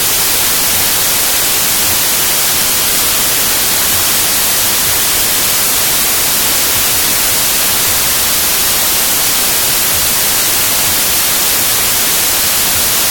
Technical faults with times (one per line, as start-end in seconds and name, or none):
0.00-13.10 wrong sample width